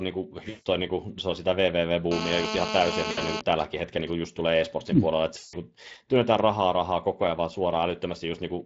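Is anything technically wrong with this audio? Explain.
Yes. The speech has four kinds of technical fault.

Speex codec damage runs through the whole clip. At about 20.6 kbps, this CELP coder leaves too few bits for the excitation. The voice sounds noisy and hoarse, with a plainly audible coded roughness. Any content above 8 kHz is only a shaped, noise-like fill.

VoIP packet loss, concealed by the speech codec, occurs three times. The first runs from 0.49 to 0.67 s. The second runs from 3.11 to 3.19 s. The third runs from 5.37 to 5.55 s, between "mm puolella että" and "työnnetään rahaa rahaa koko". The gaps last 160 ms, 60 ms and 160 ms. The decoder extends the last pitch and filter while lowering the gain. Each gap becomes a fading buzzy tone or coloured noise, and the voice stays weak briefly afterwards.

GSM phone buzz starts at 2.11 s, after "se on sitä vvv", and runs to 3.40 s. A nearby 2G phone in a call transmits 217 bursts per second. 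The audio circuit rectifies them. The result is a steady, hard, raspy 217 Hz buzz with many harmonics, only about 4 dB below the speech.

GSM signalling bursts follow from 3.41 to 4.73 s, ending before "mm puolella että". The phone's user has gone silent, so it sends only short groups of bursts. These are rectified too. They sound like even ticks with a longer 217 Hz buzz twice a second, well below the speech level.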